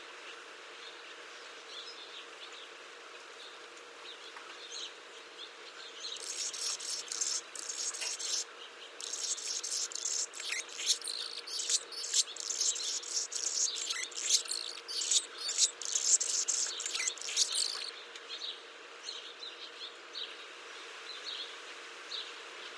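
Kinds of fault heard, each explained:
Nothing stood out as a fault on listening to this everyday sound recording.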